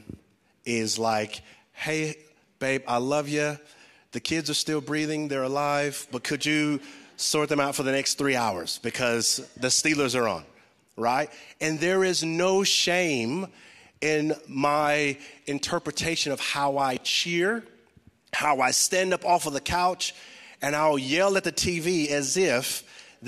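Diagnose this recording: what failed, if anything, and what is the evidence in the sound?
Nothing failed in this recording, and the sound gives no evidence of any fault.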